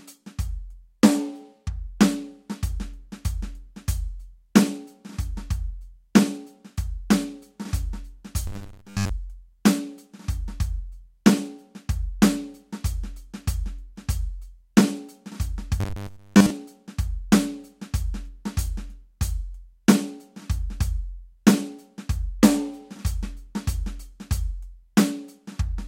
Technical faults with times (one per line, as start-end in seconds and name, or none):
8.47-9.10 robotic sound from repeated short buffers
15.80-16.50 robotic sound from repeated short buffers